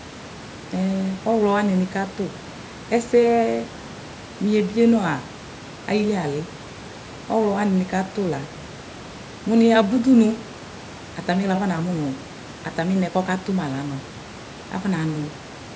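Listening carefully, nothing stood out as a technical fault, with the room's background noise sitting about 20 dB below the speech and the call microphone processing leaving nothing above 8 kHz, both as expected.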